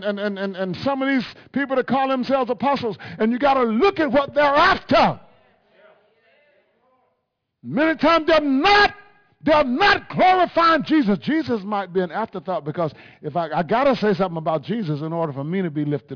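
Throughout, aliasing: resampling skipped its anti-alias filter, so content above the 5.5 kHz fold point reflects back as gritty, metallic tones about 25 dB down.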